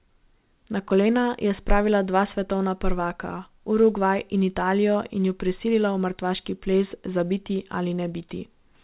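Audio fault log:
No fault found in this speech.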